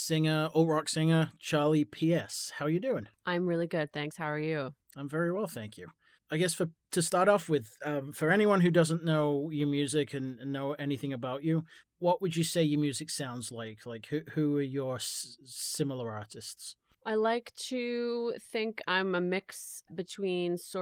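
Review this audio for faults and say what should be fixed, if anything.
Nothing here needs fixing: the speech comes through the Opus voice compression at 24 kbps in its hybrid mode with only light coding softness and the band reaching up to about 20.4 kHz, so there's nothing to chase down.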